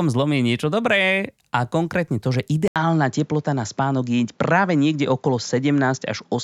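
At 2.68 s, right after "a konkrétne to že", the speech drops out for a brief 80 ms gap and then returns duller and boxier until the end, with nothing above 7.4 kHz and a faint new background hiss well below the speech. The loudness stays about the same. This is likely an input switched to a poorer device: the recording moved mid-clip to a narrower-band microphone or headset path carrying its own tone and noise floor.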